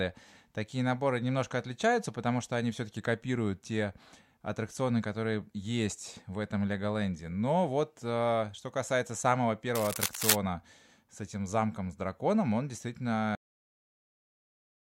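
From 9.75 to 10.36 s, cable scratch noise runs over the speech. It is a dense, uneven burst of scratching and rustling, about as loud as the speech itself. A worn cable or connector being moved, changing its contact resistance, is the likely cause.

At 13.35 s the audio shows a cut-off end. The speech stops mid-sound and drops straight to digital silence, with no natural decay. The final stretch of audio was never written, so the silence lasts to the end of the clip.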